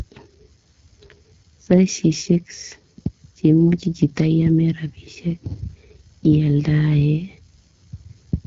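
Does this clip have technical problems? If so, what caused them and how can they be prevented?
Yes. The speech carries AMR wideband (HD Voice) codec damage throughout, plainly audible as a rough, raspy texture, which fits a low rate near 8.85 kbit/s. The codec rebuilds speech from a pulse-driven vocal tract model and substitutes shaped noise above 6.4 kHz. A spectrogram shows smeared harmonics, a noise-like band around 6.4 to 7 kHz, and nothing above 7.6 kHz. Prevent it by running the call at 12.65 kbit/s or higher.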